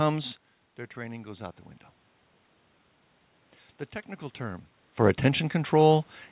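A speech clip, and the one real problem is the automatic gain rising: right after "technical term", from about 4.97 s to the end at 6.31 s, the AGC slowly cranks up, lifting voice and room noise together. The audio also sounds band-limited at 4 kHz, consistent with a G.711 call path.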